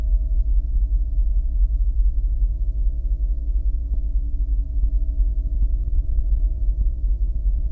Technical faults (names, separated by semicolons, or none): skip ahead; jitter buffer speed-up